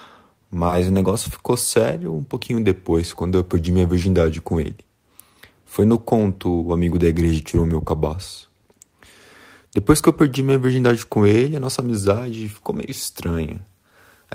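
A brief smear with a wobble runs from 0.67 to 0.74 s, just before "o negócio ficou sério". This is short concealed packet loss occurring twice back to back: two 20 ms stretches arrived too late, and the receiver extended the preceding sound to cover each gap before blending back.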